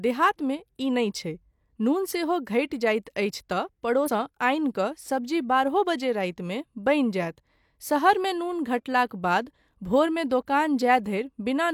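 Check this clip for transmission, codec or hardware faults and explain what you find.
One codec fault appears, a case of compressed frames skipped. It occurs at 4.04 to 4.10 s. The speech jumps forward and loses about 300 ms of audio. Whole compressed frames were never decoded, either missing from the stream or rejected as corrupt. The frame length is 46.4 ms, so the gap points to roughly seven frames lost. The result is an abrupt jump in the speech.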